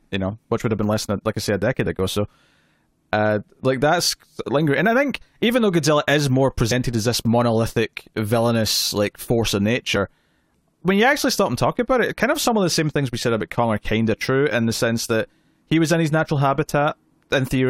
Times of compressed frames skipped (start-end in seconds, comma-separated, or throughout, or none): 6.71, 9.95